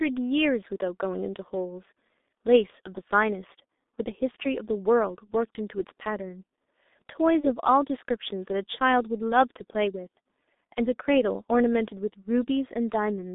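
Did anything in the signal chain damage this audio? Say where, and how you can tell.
Yes. At the codec stage, the whole clip sounds like G.723.1: the band stops around 250 Hz at the bottom and 3.7 kHz at the top, and the speech is muffled and hoarse with smeared consonants. That heavy damage fits a very low-rate coder near 6 kbit/s with a slowly updated voice model.

At the network stage there's VoIP packet loss concealed by the speech codec, at 4.31 to 4.36 s and again at 7.40 to 7.47 s. Each gap turns into a short, fading smear as the decoder stretches its last pitch and filter, which fits one lost 30 ms frame each time.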